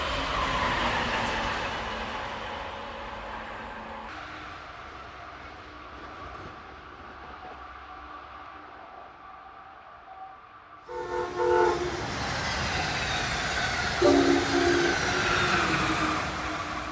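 For the first 4.09 s the audio runs low and sluggish, about 5.6 semitones flat and at roughly 0.73 times normal speed. Pitch and tempo dropping together point to a wrong sample rate, which fits material recorded at 22 kHz being played back at 16 kHz without conversion.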